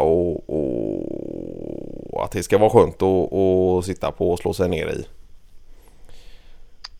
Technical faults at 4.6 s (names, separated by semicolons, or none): none